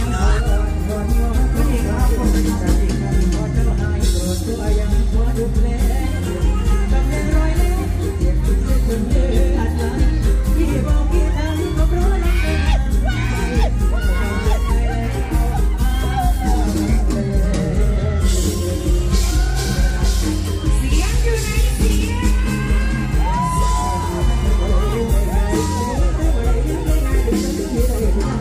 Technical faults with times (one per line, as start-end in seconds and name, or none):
none